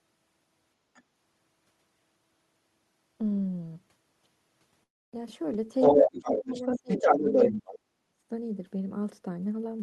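At 0.94 s a brief scrap of the other side's voice leaking through appears, lasting under a tenth of a second and very faint, far below the talker. This is likely residual echo: the far end played over the talker's loudspeaker, and the echo canceller left a small remnant in the microphone signal.

From 4.83 to 5.14 s there is a call audio freeze of about 0.3 s. A short decaying fill is followed by roughly 0.28 s of silence. The audio then resumes where it stopped, so nothing is lost but everything afterwards arrives late. The likely cause is delayed packets draining the jitter buffer, which forced the receiver to conceal the gap until data came back.

From 5.80 to 7.72 s the other side's voice leaks through again, this time for nearly two seconds and louder than the talker. The canceller is likely failing to track the loudspeaker echo here.

Within that stretch, speech is suppressed in double talk from 5.90 to 7.34 s. 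The talker dips repeatedly, by up to around 20 dB, over about a second in total. From 7.51 to 8.14 s the suppression is deeper, nearly cutting the talker out. With both sides talking at once, the canceller likely could not separate the local talker from the echo and attenuated everything. The band limit near 12 kHz points to an Opus call path.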